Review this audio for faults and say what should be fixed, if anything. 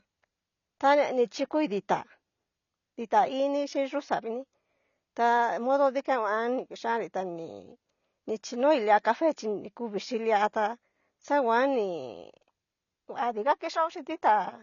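Throughout the speech, nothing reaches above 6.9 kHz, and the sound is dull and smeared, with a fizzy warble on sibilants. The likely cause is AAC compression: the encoder dropped the top band and coarsely quantised the rest, which fits a bitrate near 24 kbps. A spectrogram shows a flat ceiling at 6.9 kHz. Encoding at a higher bitrate, or keeping a lossless master, would prevent this.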